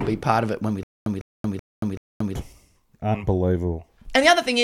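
Just after "of it when we", from 0.83 to 2.36 s, the speech falls into a stutter with silent gaps: a 151 ms fragment plays, then about 230 ms of dead digital silence, cycling every 381 ms for four repeats. This is likely a stalled player or stream replaying its last buffered piece on each retry, so the speech meant for that stretch is lost. A plain dropout would give only silence, and a skip would jump ahead. Here the same burst returns at a steady pace.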